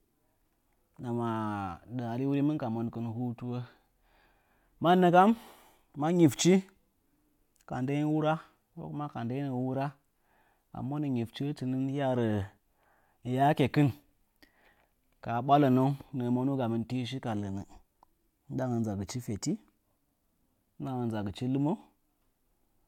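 Speech recording with no technical faults to report.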